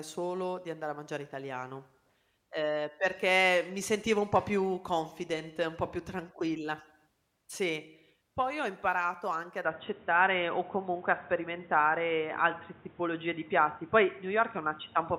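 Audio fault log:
9.65–15.19 s, input switched to a poorer device: right after "ho imparato anche ad" the speech suddenly goes dull and boxy and stays that way to the end, with nothing left above about 3.8 kHz. There's no gap at the changeover, but the level shifts by around 5 dB and a new noise floor comes in, roughly 30 dB under the voice. That's most likely the recording hopping to a narrower-band mic or a headset's call profile, which brings its own tone and background noise.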